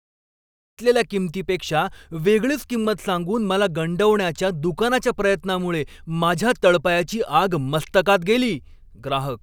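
Nothing stood out on listening; the gentle fade-in at the start, complete by about 0.8 s, is an ordinary edit rather than a problem.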